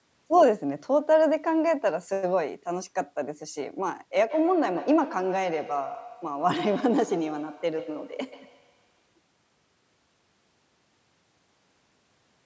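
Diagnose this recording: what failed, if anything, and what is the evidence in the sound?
Feedback echo between two devices, at the call stage: from 4.3 to 9.1 s, speech recurs roughly every 150 ms at about 16 dB down, thinning with each pass. A second device's playback re-enters the microphone, so unlike a single echo it repeats.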